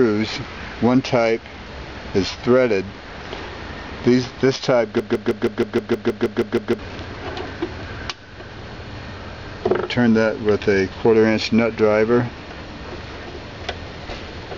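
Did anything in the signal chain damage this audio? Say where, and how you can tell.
Yes. From 5.00 to 6.79 s there is a broken-record loop. A fragment of about 158 ms repeats exactly, back to back, eleven times. The playback or streaming stage likely stalled and kept resending its last buffer. The audio for that stretch is lost.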